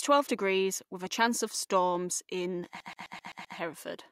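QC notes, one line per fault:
2.80 to 3.58 s, CD stuck on one turn. Just after "chance of storms in", the speech locks into a fast, even stutter. A fragment of about 129 ms plays six times in a row, with a brief mute at each jump. This is the sound of a disc skipping. The laser falls back one track at the same damaged spot on every rotation, so the same tiny slice keeps returning at a steady rate until playback breaks free.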